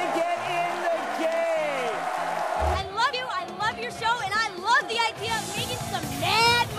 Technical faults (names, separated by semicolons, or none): compressed frames skipped